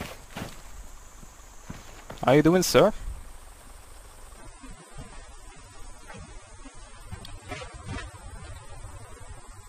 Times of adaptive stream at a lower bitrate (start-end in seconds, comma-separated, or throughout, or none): 4.37-9.68